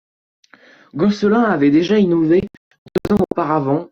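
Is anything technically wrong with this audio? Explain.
Yes. There is a digital broadcast dropout between 2.40 and 3.32 s of this speech. The receiver muted whenever frames failed. The sound breaks into several silent holes spread over that stretch, the longest 144 ms. About 576 ms of audio is lost, which fits roughly two dozen failed frames.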